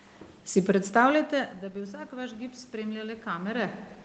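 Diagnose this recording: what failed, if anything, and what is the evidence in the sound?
The automatic gain control in the call processing was rising. After the input fell by about 17 dB when the talker drew back near 1 s, the AGC raised its gain by about 5 dB from 1.61 to 3.56 s. The speech and the room noise swell together slowly.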